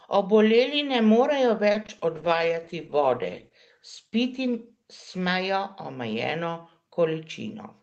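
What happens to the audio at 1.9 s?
At 1.9 s you're in the middle of a burst of repeated packet loss, running from about 1.71 to 2.02 s. Several short holes, none longer than 30 ms, get patched by stretching the last sound, so the audio turns choppy and robotic with small bits dropped out.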